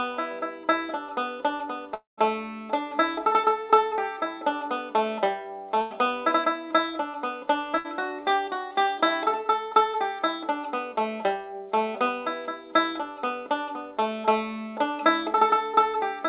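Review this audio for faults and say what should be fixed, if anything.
Long network dropout: from 1.94 to 2.19 s the sound breaks off. The last sound is stretched into a fading buzz or hiss. Then about 150 ms of near silence follows. Roughly 240 ms never arrives, likely a long network dropout. A steadier link with redundant packet coding would prevent it.

Burst of packet loss: at 5.81 to 5.92 s and 7.78 to 7.86 s, about 100 ms and 60 ms go missing. Each time the receiver holds the last sound and turns it down. Playback resumes past the gap. Forward error correction and a slightly deeper jitter buffer would prevent it.

The G.711 A-law call path leaves nothing above 4 kHz.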